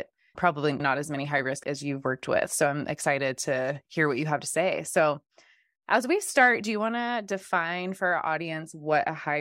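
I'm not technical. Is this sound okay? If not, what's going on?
Yes, nothing in this speech recording points to a technical problem with how the sound was captured or delivered.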